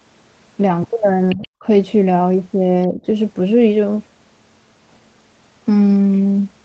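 From 1.29 to 1.47 s, a faint second voice sits roughly 15 dB under the main speech. This is likely the other side's voice leaking through: the far end played from the loudspeaker was not fully removed from the microphone and survives as a scrap.

Overlapping that, from 1.34 to 1.65 s and again from 2.88 to 3.07 s, the main speech dips sharply, by around 20 dB at its deepest in the first stretch and about 15 dB in the second. This fits speech suppressed in double talk, where the canceller turned everything down during overlap, leaving the voice briefly hollowed or gapped. All of this sits within a band that ends at 8 kHz.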